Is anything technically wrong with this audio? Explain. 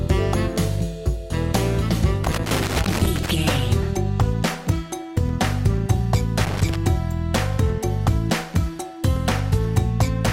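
Yes. Loose connector crackle appears from 2.24 to 3.30 s and again from 6.45 to 6.76 s: a worn contact repeatedly breaks and remakes the path, chopping the signal into irregular scratchy bursts. The waveform shows jagged dropouts and spikes, and the spectrogram shows scattered broadband vertical streaks.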